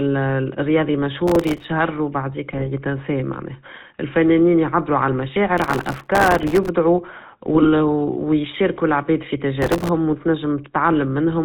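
The whole thing runs through a GSM full-rate codec, and you can hear it plainly: nothing above 4 kHz, plus that buzzy, gravelly roughness from the pulse-driven vocal-tract model. It fits a 13 kbps full-rate stream.

From 1.27 to 1.64 s there's processor overload crackle, a gritty tearing over the speech. Dozens of tiny buffers, each a millisecond or two, missed their deadlines in a row, and each gap got filled with a hard-edged scrap of old audio.

Then 2.50 to 2.67 s brings GSM bit errors, a brief squawky, gargling break where corrupted filter, pitch or gain values threw the decoder off. It sounds like about a 1% error rate smearing across a handful of frames.

The crackle comes back longest at 5.58 to 6.69 s, roughly a hundred missed buffers' worth of the same gritty tearing. There's another bit-error squawk at 7.55 to 7.69 s, and a final short crackle burst from 9.62 to 9.89 s.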